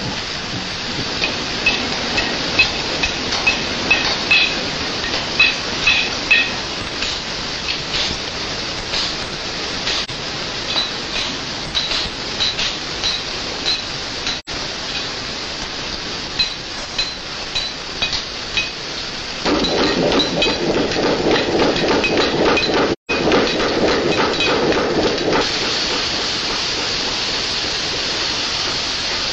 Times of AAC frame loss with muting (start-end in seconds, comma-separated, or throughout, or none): 10.04-10.10, 14.39-14.49, 22.92-23.11